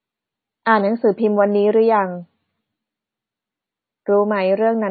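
Throughout, the speech bears the marks of low-bitrate audio saved at a high bitrate: it was likely encoded at a very low MP3 rate and then re-saved at a much higher one. Nothing is present above 4.6 kHz, so the speech sounds dull and muffled.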